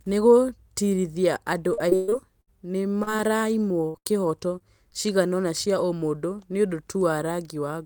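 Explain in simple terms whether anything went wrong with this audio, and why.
From 1.73 to 2.49 s the speech turns choppy, with bits dropping out. This is repeated packet loss (robotic sound): five chunks of the call went missing in quick succession, the longest about 120 ms, and each hole was patched by stretching the sound just before it.

Brief smears or wobbles appear at 3.03–3.09 s, 3.17–3.21 s, 4.59–4.62 s and 4.90–4.93 s. Each is a short concealed packet loss: a few hundredths of a second never arrived in time, so the receiver filled the hole by continuing the previous sound before blending back in.

At 3.89–3.96 s and again at 3.98–4.07 s the speech briefly holds as a buzz or fading hiss, then jumps ahead. These are bursts of packet loss: 60 and 80 ms of audio went missing, and the stretched filler faded while the real sound was lost.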